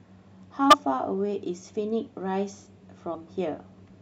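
Right around 0.70 to 0.74 s the speech lurches forward. That's compressed frames skipped: a few frames of the encoded stream never got played, either missing from the file or thrown out by the decoder as damaged, so roughly 70 ms of audio just vanishes. The same thing happens again at 3.11 to 3.16 s, dropping around 50 ms.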